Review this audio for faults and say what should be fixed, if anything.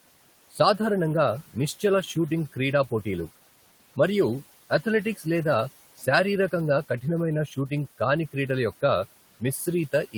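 Noise suppressor artifacts run through the whole clip. The suppressor pulls the room noise down by about 17 dB in the gaps and lets it back up under the speech, so what is left of the noise rises and sinks with the words. On a spectrogram the noise floor looks blotchy and pulsing, with dark holes between phrases. A gentler suppression depth with slower gain smoothing would prevent this.

Speech cut by the noise suppressor occurs at 5.97–6.07 s, dipping about 12 dB, and again at 7.47–7.71 s, about 9 dB, just before "కాని క్రీడల యొక్క". Each time, roughly a tenth of a second of quiet speech was mistaken for noise and sounds swallowed. The waveform shows a sudden envelope notch inside the speech, and the spectrogram loses energy there. Since the room noise already sits about 20 dB below the speech, a less aggressive suppressor threshold would prevent this.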